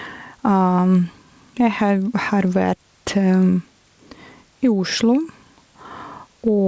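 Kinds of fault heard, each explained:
Gain pumping, throughout: the level swings by around 10 dB, squashing loud and soft parts together. The likely cause is a fast limiter clamping down on excessive microphone gain.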